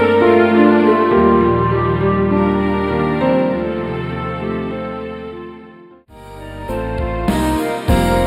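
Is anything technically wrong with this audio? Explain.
Yes. Throughout the whole clip the top end sounds dull and hollow, with a fixed dip in the treble around 7 kHz that never moves. This is channel delay (comb filtering): one channel lags the other by a few samples, about 0.07 ms, and when the two are summed to mono, content common to both cancels at evenly spaced frequencies. With such a tiny offset, the first notch lands high, in the upper treble.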